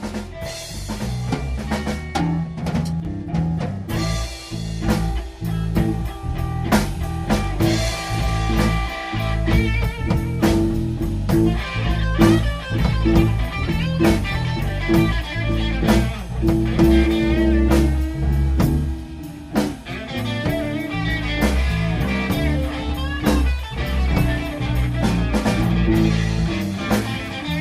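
At 3.00 s the sound abruptly dips by about 6 dB, then recovers at 3.05 s, a brief notch in level. This is likely one channel dropping out: with one side of the stereo pair momentarily lost, the mono sum keeps only half of the shared signal.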